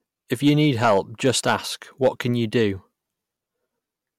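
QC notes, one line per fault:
0.33–1.56 s and 2.03–2.08 s, hard clipping: the speech is driven past what the signal path can hold, by about 6 dB in the first stretch and about 5 dB in the short burst just before "can you", so the peaks get sliced flat. Those squared-off tops throw harmonics way up the spectrum, which is why the first section crackles on its peaks and the second comes across as a quick crackle.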